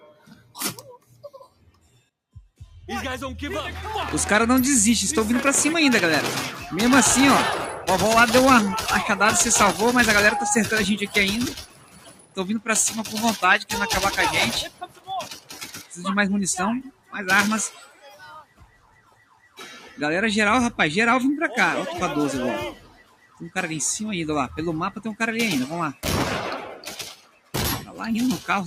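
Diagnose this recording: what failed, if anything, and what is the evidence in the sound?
Call processing failed: a speech noise suppressor applied to music or sounds stays active throughout. Level swings by about 15 dB as it treats steady material as noise, letting attacks through while held parts sink. Unlike a compressor, it tracks steadiness, not loudness.

Sound cut by the noise suppressor appears at 0.0–2.61, 11.49–13.15, 14.65–16.01, 16.87–17.15, 17.69–19.98, 22.73–23.49 and 26.64–28.01 s, sinking by up to about 17 dB. The level dips and decays shorten rather than going silent, which distinguishes it from network dropouts.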